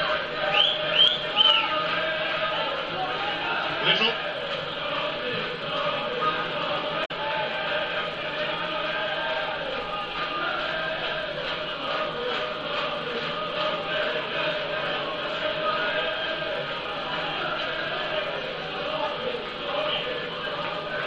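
At about 7.02 s there's a short burst of damaged data in a compressed stream, lasting roughly a tenth of a second until 7.11 s. Some of the encoded bytes at that point are wrong, so the decoder can't make sense of those frames, loses its place and has to hunt for the next valid frame header before it can carry on. You hear it as a quick chirp, squawk, click or short hole breaking into the sound before playback settles again.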